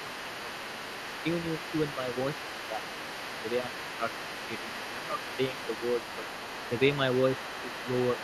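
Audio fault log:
Throughout: other side's voice leaking through, a faint second voice sitting about 15 dB below the talker, likely residual loudspeaker echo the canceller left behind.
0.06–0.53 s, 1.94–2.17 s, 2.70–2.83 s, 3.54–3.67 s: speech suppressed in double talk, the talker dipping by around 5 dB in short patches of a fraction of a second, likely while both sides overlap.
5.12 s, 7.51 s: dropped samples, each a single sharp click likely from a sub-millisecond gap where the waveform jumps, far too brief to remove any sound, unlike a dropout.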